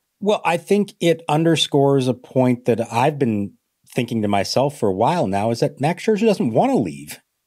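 No technical faults are audible.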